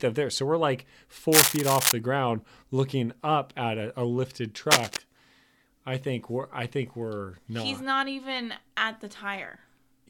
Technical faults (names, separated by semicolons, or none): cable scratch noise